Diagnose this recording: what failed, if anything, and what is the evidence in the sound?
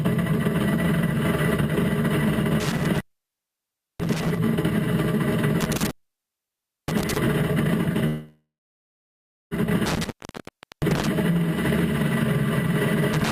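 Intermittent contact in the analogue wiring: the sound cuts out at 2.60–4.38 s, 5.61–7.18 s, 9.86–11.07 s and from 13.13 s to the end, with the line open for roughly 0.7–1.0 s each time. Crackle marks each break and faint hiss fills it. Unlike a network stall, the audio during the break is simply lost.

Call audio freeze at 8.07–9.54 s: the last sound is stretched into a fading buzz or hiss, then about 1.06 s of silence. Playback resumes exactly where it stopped, so nothing is lost but everything after runs 1.45 s late. This likely comes from the jitter buffer running empty on the network path. The fading fill and the absence of any lost audio distinguish it from the contact faults.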